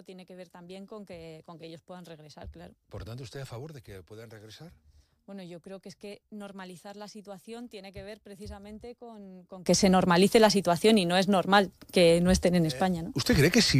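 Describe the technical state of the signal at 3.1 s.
At 3.1 s the signal lies within a span from 0.0 to 9.66 s where the mono sum falls by about 22 dB, leaving a faint residue. The likely cause is one channel inverted: reversed polarity on one side cancels shared content when summed.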